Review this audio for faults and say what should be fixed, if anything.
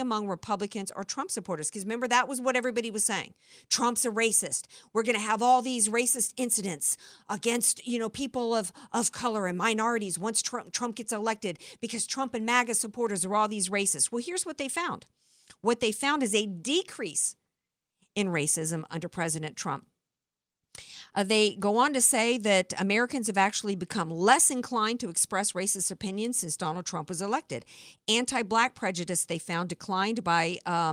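No faults found in the speech recording, so nothing needs fixing.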